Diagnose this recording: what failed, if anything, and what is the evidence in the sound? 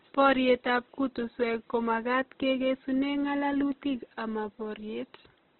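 The codec stage failed: the speech carries heavy Opus compression damage throughout, likely from an encode at a very low rate, which fits roughly 12 kbps. Nothing sounds above 4 kHz, and band filling by folding or noise leaves the tonal parts rough and grainy.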